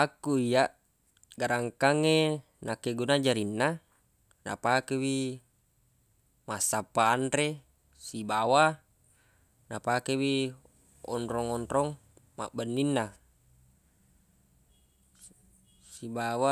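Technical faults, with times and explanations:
No technical faults detected.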